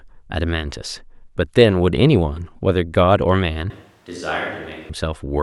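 From 3.70 to 4.89 s the speech jumps to a switch to a distant microphone, likely a failed close mic. It turns hollow and roomy, roughly 10 dB quieter with thinner bass. The waveform shrinks and the spectrogram shows a lighter low end and a raised noise floor.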